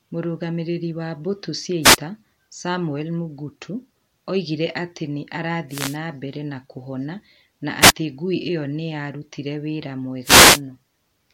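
At 1.82 to 1.97 s, 5.69 to 5.97 s after "oigire atĩ nĩ", 7.80 to 7.92 s after "na mbere nakuhona na", and 10.23 to 10.61 s after "ĩyo nĩ yarutire wĩra", the speech is hit by a wireless microphone noise hit. Each one sounds like a brief swish of static lasting between about 0.12 and 0.38 s. The FM radio link dropped momentarily when reflected signals cancelled at the receiver, letting receiver noise rise over the speech.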